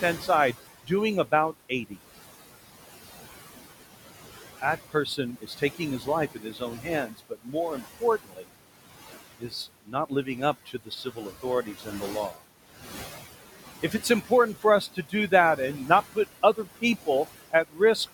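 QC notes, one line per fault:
Throughout: noise suppressor artifacts. The room noise, which sits about 14 dB below the speech, sinks by about 15 dB in the gaps and comes back up under each phrase. The suppressor is lowering the bands it judges to be steady noise frame by frame, so the background pumps.
0.2–0.9 s, 1.69–1.99 s, 4.58–8.48 s, 9.39–10.27 s, 10.66–12.4 s, 13.82–16.17 s, 16.54–17.08 s, 17.51–18.13 s: speech cut by the noise suppressor. Soft sounds within these spans drop away and sound swallowed, by about 11 to 19 dB at worst. The longest loss, around a second and a half in total, falls in the 4.58–8.48 s span. The suppressor mistook quiet speech energy for background and turned it down along with the noise.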